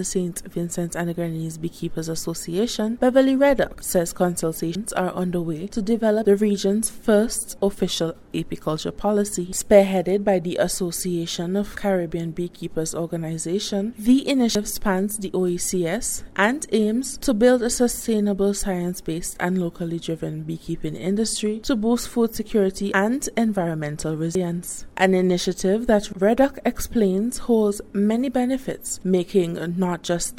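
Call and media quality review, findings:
Audio missing between chunks: hard skips at 4.75, 14.55 and 24.35 s, each dropping about a fifth of a second, ends butted together with no gap. Likely the recorder's 10 s chunk rollover, losing a slice every handoff.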